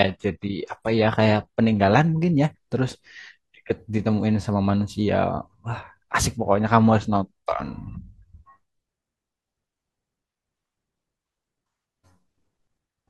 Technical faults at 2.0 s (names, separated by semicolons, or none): adaptive stream starting at a low bitrate